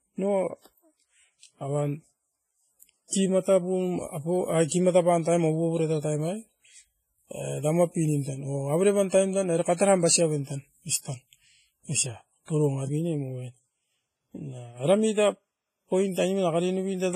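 Throughout the speech, nothing sounds above 15.3 kHz, and heavy-codec artefacts persist inside a high-bitrate MP3. This is likely low-bitrate audio saved at a high bitrate: the damage fits an earlier coarse encode, which re-encoding cannot undo. Unlike plain low-bitrate audio, the file itself is large.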